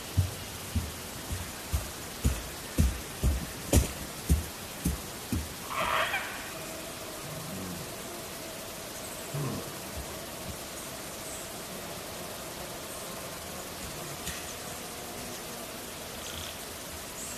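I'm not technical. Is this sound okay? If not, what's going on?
No. At 9.34 s there is damaged data in a compressed stream. Part of the file was corrupted, so the player briefly lost its place there.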